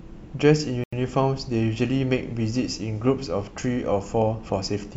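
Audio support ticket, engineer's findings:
Dropout in the speech at 0.84 s, roughly 87 ms of dead silence, picks back up at 0.93 s. Clean cut in and out, no smearing or repeated bits. Likely a Bluetooth stall on the headphone link: interference holds packets up, the receive buffer runs dry, and playback sits silent until the resends land. Worth checking the radio environment near the listener.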